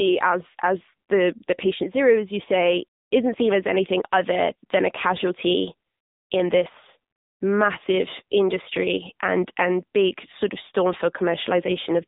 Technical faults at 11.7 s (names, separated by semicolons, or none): AMR narrowband mobile codec